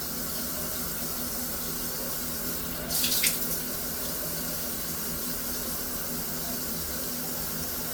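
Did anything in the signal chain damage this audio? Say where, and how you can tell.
Yes, at the codec stage. Throughout the clip there's classic generation loss: swirly, hollow texture and blurred attacks, more smeared than a single Opus encode around 64 kbit/s would give. It likely comes from about seven re-encodes, each quantising on a shifted frame grid.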